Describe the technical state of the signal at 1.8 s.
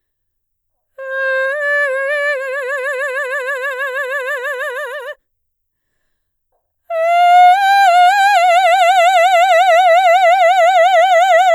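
At 1.8 s the music plays through intact, with no audible fault at that moment.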